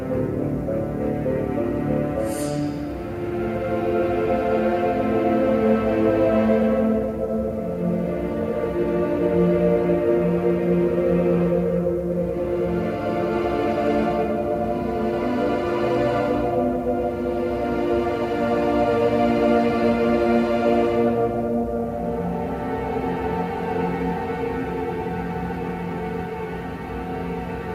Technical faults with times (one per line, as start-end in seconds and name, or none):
none